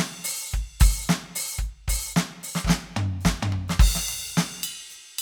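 The music in this clip comes through with no audible technical faults in the signal.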